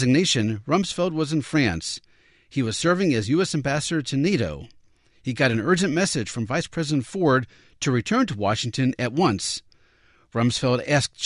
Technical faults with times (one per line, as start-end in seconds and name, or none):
none